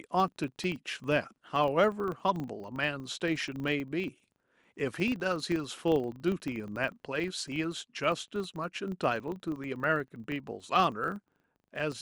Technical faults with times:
0.00-12.02 filter restarted on every block

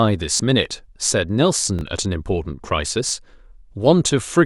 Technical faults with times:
0.37-0.39 repeated buffer
1.79-1.81 repeated buffer
3.09-3.11 repeated buffer

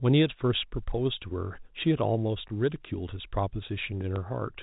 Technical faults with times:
2.48-2.50 packet loss with last packet repeated
4.16 packet loss with last packet repeated

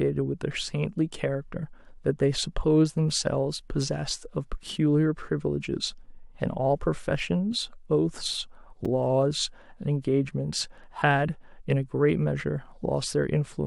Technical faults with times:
8.85 gap between stream segments

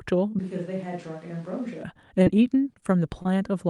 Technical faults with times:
0.39-1.83 switch to a distant microphone
2.23-2.84 repeated packet loss (robotic sound)
3.22-3.27 short stall from a late packet

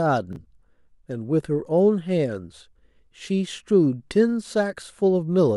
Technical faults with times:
0.33-0.36 chunks out of order

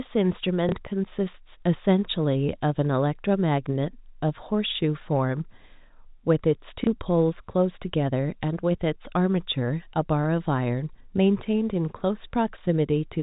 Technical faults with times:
0.69-0.72 packet loss with last packet repeated
6.84-6.87 packet loss with last packet repeated

